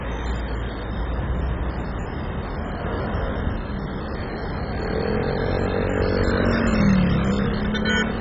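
From start to finish the sound is dull and granular, with a watery gurgle that shifts as content changes, most likely from heavy MP2 compression at a very low bitrate, something near 16 kbps. Starved of bits, the coder switches off whole upper sub-bands and quantises the rest coarsely. On a spectrogram nothing appears above about 7.5 kHz, and the remaining bands flicker on and off in blocky patches, while the waveform looks roughened.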